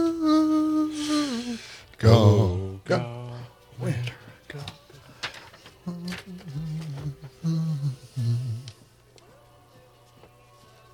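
From 2.47 to 3.41 s, and again from 8.68 s to the end, a Bluetooth SBC bit pool drop starves the upper sub-bands and coarsens quantisation. Treble dulls and gritty noise rises, consistent with the bit pool halving from 28 to 14, near 108 kbps.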